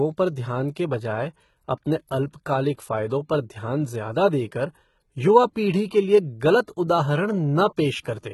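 Throughout the speech, s sounds are gritty and metallic from heavy codec damage at 16 kbps. Likely HE-AAC compression, rebuilding treble from copied lower bands.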